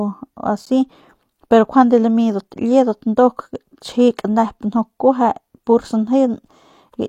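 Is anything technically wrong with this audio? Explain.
Yes. At 0.65 s the speech stops dead for about 12.5 ms. This is a gap between stream segments. The timestamps of two adjoining segments fail to meet, so the player fills the hole with silence. The hard edges make a brief click-like dropout, though no audio is lost.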